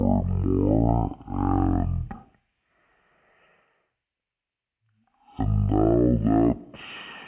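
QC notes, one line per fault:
Throughout, wrong sample rate: the speech runs at half speed and sits a full octave low, 12 semitones down, so it sounds slow, heavy and dragged. The samples are being clocked out at half the rate they were captured at, with no conversion in between, so every waveform is stretched to twice its length and pitch drops by that same factor of two, which fits 16 kHz audio played back at 8 kHz.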